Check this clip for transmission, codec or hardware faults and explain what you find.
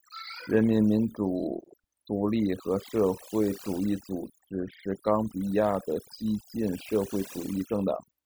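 One fault runs through the whole speech clip: overdone noise removal. A noise reduction stage was applied far too aggressively, so any frequency band sitting close to its noise estimate gets cut hard or switched off entirely, and the softer parts of the speech fall below that line along with the noise. The pauses drop to near silence broken by twinkling specks.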